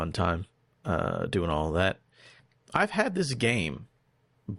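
At about 2.39 s, right after "uh doing all that", the speech jumps abruptly forward with a brief blip lasting to roughly 2.45 s, and the following sound picks up with no sense of continuity, as if a stretch of the talk has simply vanished. This is a stream segment skipped: one chunk of the segmented stream likely failed to arrive or load, so the player dropped it and carried on from the next segment, splicing the audio at the gap.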